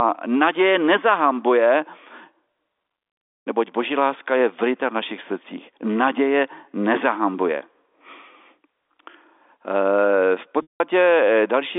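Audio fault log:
10.62–10.80 s, packet loss with pitch repetition: a brief buzzy held tone fades to silence as the receiver repeats the last pitch period across 180 ms of lost packets.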